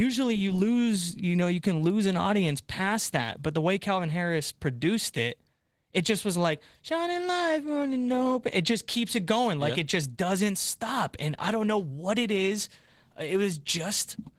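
Throughout the speech, the voice sounds hoarse and faintly robotic. This is Opus voice compression in hybrid mode: a linear-prediction coder handles the band below 8 kHz, a transform layer covers above, and the coarse excitation fits a bitrate near 16 kbps.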